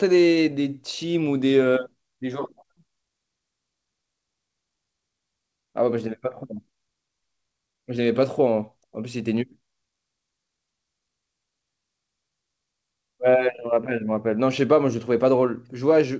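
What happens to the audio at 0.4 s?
The sender's clock runs around five percent faster than the receiver's, so at 0.4 s the audio is under clock drift between sender and receiver, and its jitter buffer keeps overfilling. To keep up, the receiver makes repeated timing corrections from 0.04 s to 16.11 s, trimming short pieces so playback runs at about 105 percent, heard, if at all, as slight, unevenly spaced hiccups or an unsteady tempo.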